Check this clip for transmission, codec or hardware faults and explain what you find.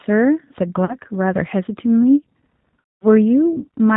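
Two faults are present: the whole clip has passed through a low-bitrate speech codec, and two short stretches show concealed packet loss.

G.729 codec, throughout: the speech is carried at 8 kbit/s by the G.729A variant. Rather than storing the waveform, the codec sends a vocal tract filter, a pitch estimate and a handful of pulses for each short frame, and rebuilds speech from those. Nothing above 4 kHz survives, so sibilants are dull, and the voice has a plainly audible rough, synthetic grain. A simple low-pass filter would lose the same highs without that grain.

VoIP packet loss concealed by the speech codec, at 0.85 to 0.95 s and at 2.95 to 3.06 s: the first gap covers 40 ms of lost audio, which fits two 20 ms packets. The second covers 200 ms, which fits ten. The decoder fills each gap by repeating its last pitch and filter settings at falling gain, so the sound smears into a buzzy tone or coloured noise that fades, and stays weak just after the gap. 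A plain dropout would leave silence or a click, not this fading fill.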